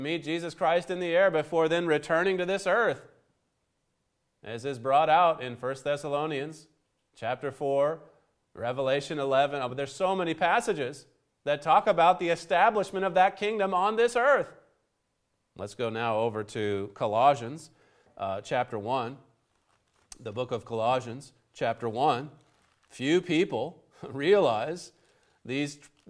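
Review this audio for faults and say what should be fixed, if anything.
Nothing in the audio needs to be fixed, as no faults can be heard.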